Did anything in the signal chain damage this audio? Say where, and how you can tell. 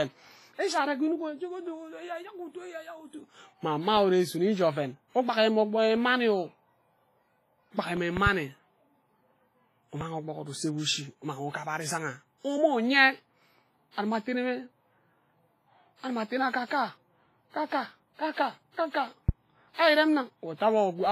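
Yes. The damage comes from four faults.

WMA compression: the codec stage is the likely cause, with damage pointing to roughly 24 kbps WMA. Nothing remains above 15.5 kHz, and the whole clip sounds heavily washy and ringing.

Periodic USB or driver dropouts: at the driver or buffer stage, about 0.5 ms of audio is replaced by silence every 1.0 s, from 3.97 to 7.97 s. This produces five regular ticks.

Loud pop: a voltage step or pulse, likely from a plug, switch, static or driver glitch, is added to the speech. There is a double pop at 8.17–8.29 s (about 15 dB), another at 10.01–10.04 s (about 10 dB), and one at 19.29–19.31 s (about 15 dB).

Pre-echo: in the codec stage, block-wide quantisation noise fills the gap before attacks. A smearing hiss lasting 44–57 ms precedes attacks at 16.66, 17.66, 18.72, 19.73 and 20.55 s.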